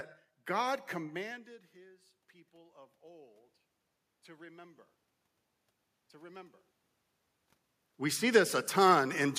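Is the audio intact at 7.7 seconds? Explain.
Yes, at 7.7 seconds the audio is intact, with no system fault at that moment.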